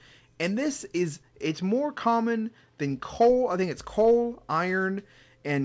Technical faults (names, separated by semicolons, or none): input switched to a poorer device